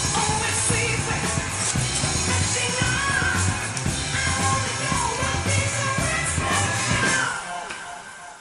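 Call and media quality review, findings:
No audible transport, device or processing faults found in the signal; nothing to action.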